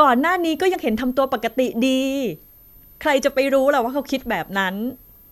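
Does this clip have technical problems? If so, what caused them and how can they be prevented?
Yes, a switching supply whistle runs throughout: a faint high tone wandering between about 12.7 and 13.0 kHz, roughly 30 dB below the speech. It shows as a thin, slightly drifting horizontal line on a spectrogram, likely from a power supply cycling in audible burst mode. Using linear or well-filtered supplies and keeping chargers off the audio chain prevents it.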